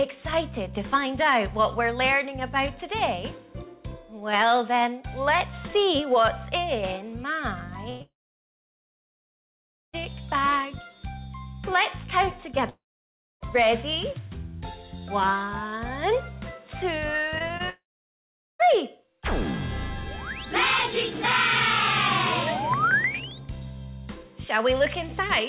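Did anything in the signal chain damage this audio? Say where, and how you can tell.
Yes, at the network stage, after the call codec. The path itself tops out at 4 kHz, which fits 64 kbps G.711 mu-law, but the damage comes from packets that never arrived.

A burst of packet loss starts at 7.90 s and runs to 8.02 s. About 100 ms is gone, and the receiver stretches the last sound into a held buzz or hiss that fades before the gap deepens. It is longer than a concealed blip, and what tells it apart from a dropout is that there is no dead silence inside this span.

Long network dropouts follow at 8.02 to 9.95 s, 12.69 to 13.42 s and 17.70 to 18.61 s, losing about 1.9 s, 0.72 s and 0.9 s. Each begins with a brief fading continuation and then falls to silence for most of its length (about 1.84, 0.63 and 0.79 s). The sound resumes later, with the gap simply missing, which is likely a stall in the network stream. 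That silence is what separates these from bursts.

Short concealed packet losses cluster at 17.38 to 17.42 s, 17.48 to 17.51 s and 17.57 to 17.61 s, each about 20 ms missing. They come across as quick smears or wobbles where the decoder extrapolated the previous sound and blended back. Unlike the bursts, nothing fades out audibly. The sound stays continuous, and the rapid trio comes just before the 17.70 s dropout.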